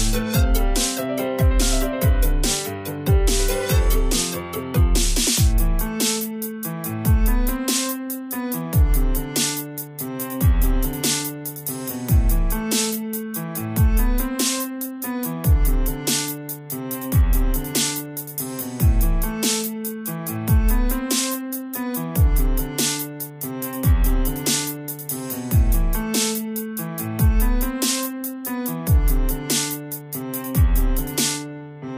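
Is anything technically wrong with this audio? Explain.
No, nothing technically wrong can be heard here.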